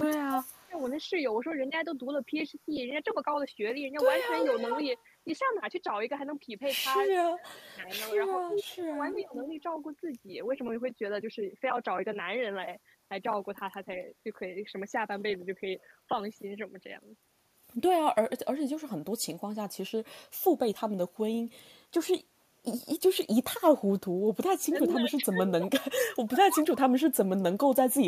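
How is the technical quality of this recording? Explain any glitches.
The recording has two recurring call-path problems, suppression of the speech during overlapping talk and leaked echo, both concentrated in the first ten seconds, with one more suppression near the end.

Speech suppressed in double talk occurs at 0.06–0.79 s, 7.08–7.89 s, 8.75–9.53 s and 24.59–27.45 s. The likely cause is an echo canceller that could not separate this talker from the loudspeaker signal while both sides spoke, so it turned everything down. The speech dips by about 35, 25, 15 and 30 dB in those spans, with roughly 0.7 s affected in each of the first three and about 1.5 s in the last.

Echo leak occurs at 0.51–1.03 s, 4.38–5.02 s and 8.48–9.51 s. A delayed copy of the speech arrives 350 ms late. The likely cause is a far end on loudspeaker whose echo canceller let part of its microphone pickup return down the line. 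The first leak is faint, about 35 dB below the speech. The later two are only about 5 dB down, which makes them a far stronger trailing repeat.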